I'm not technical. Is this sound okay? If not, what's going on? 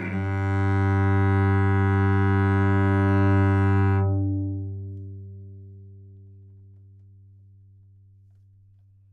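Yes, this one's fine; nothing in it sounds broken or glitchy, so there's nothing to worry about.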